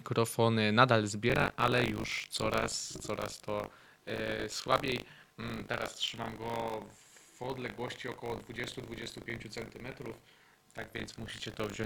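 Buffer tearing runs from 1.28 s to the end: writer and hardware reader have slipped out of step, so a slice of each period, roughly a seventh, replays audio about 40 ms old, giving a gritty 50 Hz buzz whenever sound is present.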